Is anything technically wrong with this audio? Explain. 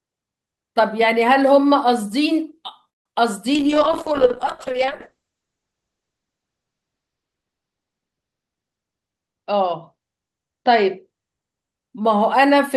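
Yes. The speech has four distinct faults: a gap, a stretch that drags, a long passage of degraded quality, and a stretch that rushes.

From 2.89 to 3.14 s there is a long network dropout, likely caused by packets failing to arrive. The last sound is carried on as a fading buzz for about 225 ms. Around 60 ms of real audio never plays, and the delay shifts by about a tenth of a second. Unlike a brief packet loss, the concealment runs out and leaves near-silence.

From 3.50 to 4.29 s a jitter buffer slow-down follows. The receiver rebuilds its reserve by repeating pitch periods, adding 65 ms so the speech runs at about 92% speed. Sounds are drawn out, but the pitch stays put, which separates it from a clock or resampling error.

A call bitrate drop runs from 3.55 to 11.82 s. The encoder falls from 32 to 8 kbps and stays at the lowest rate for about 3.5 s. Bandwidth narrows from 20 kHz to 8 kHz, so the speech turns muffled and rough. 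This is a steady coarsening over seconds, not a momentary glitch.

From 8.51 to 9.35 s a jitter buffer speed-up trims excess delay by cutting short pitch-period pieces, about 150 ms in total. The speech runs at roughly 119% speed and sounds hurried at unchanged pitch. It is the mirror of the earlier slow-down and has no gap like the dropout.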